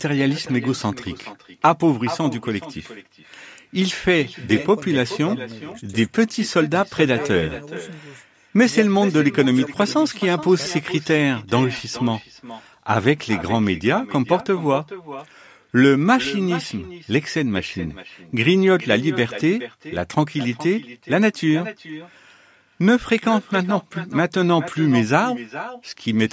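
Throughout the speech, an echo with no canceller returns each phrase roughly 0.4 s later, about 14 dB quieter and thinner; waveforms show faint delayed repeats, and spectrograms show ghost copies beneath the 8 kHz ceiling.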